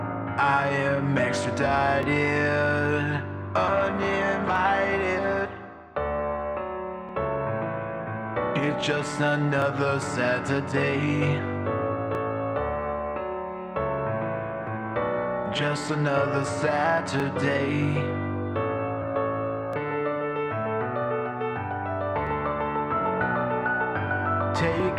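Clock drift buffer slips run from 2.03 s to 24.8 s: a click recurs every 2.53 s, about ten in all. The likely cause is two devices with clocks differing by roughly 500 parts per million, so the buffer between them periodically drops or repeats several dozen samples.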